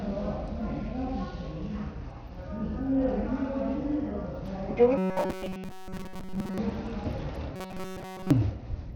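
Bluetooth SBC compression runs through this recording of everyday sounds from start to finish. The treble thins and flickers, and a gritty, aliased grain sits on top. This is the likely result of a sub-band codec starved of bits, which points to a low bitrate around 80 kbps. The small bit pool leaves the upper bands with few or no bits. Robotic sound from repeated short buffers appears from 4.98 to 6.58 s and again from 7.56 to 8.31 s. In these stretches the sound collapses into a rigid metallic buzz at 188 Hz. The likely cause is playback repeatedly recycling a slice of about 5.3 ms while fresh audio arrives too slowly. In the first stretch most of the sound is made of repeats, while in the second all of it is.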